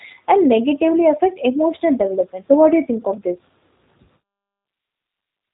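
Throughout, plainly audible G.729 codec damage, fitting an 8 kbit/s pulse-excited coder, leaves the speech rough and synthetic; a spectrogram shows nothing above 4 kHz.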